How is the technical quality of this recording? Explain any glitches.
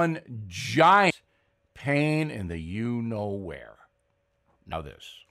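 The recording has one glitch. At 1.09 s, damaged data in the compressed stream makes the decoder misread a frame and resynchronise, producing a brief blip that shows as a thin vertical smear on the spectrogram and a sudden discontinuity in the waveform.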